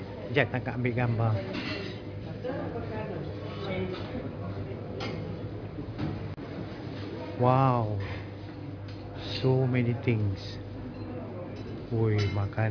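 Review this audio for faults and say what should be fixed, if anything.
Aliasing runs through the whole clip: the upper range sounds gritty and metallic, with stray tones at unrelated pitches roughly 25 dB below the signal, and the spectrum runs hard up to a 5.5 kHz edge. That fits a drop from 44.1 kHz to 11 kHz without filtering, folding content above 5.5 kHz back down. To prevent it, apply a steep low-pass below 5.5 kHz before reducing the rate, or use a proper resampler.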